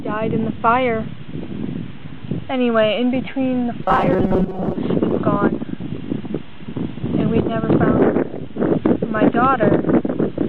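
From 3.83 to 4.76 s the sound turns into a rigid, metallic buzz at 188 Hz. This is robotic sound from repeated short buffers. It likely comes from audio arriving too late, so a buffer of about 5.3 ms repeats, replacing roughly half the material.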